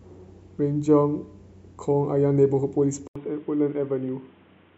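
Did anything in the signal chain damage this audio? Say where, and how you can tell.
Yes. At 3.08 s, an 80 ms gap, then nothing above 3.8 kHz and a faint new noise floor: likely the input switched to a poorer device.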